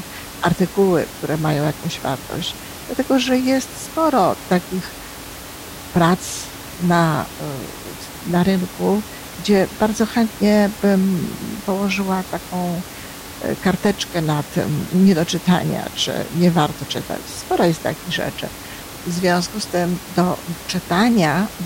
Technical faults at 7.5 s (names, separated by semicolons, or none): none